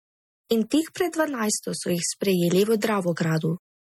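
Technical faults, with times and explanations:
Throughout: MP3 compression. The speech has a plainly audible watery, swirling texture, and sibilants carry metallic chirps. This is likely lossy transform coding. The sound is split into many frequency lines, and weak lines are dropped when bits run short, so they flicker on and off from frame to frame. The damage points to a low bitrate near 48 kbps. The spectrum stops at about 19.7 kHz. Unlike simple low-pass filtering, the artefacts shift and warble over time.
0.49 s: pre-echo. A hiss lasting about 13 ms arrives just before a sharp onset, softening its attack. The codec spreads quantisation noise evenly across a whole block. Because this attack falls late in its block, noise sized for the loud part leaks into the quiet moment before it. Unlike a click or dropout, it is a brief smear of noise that leads the transient rather than following it.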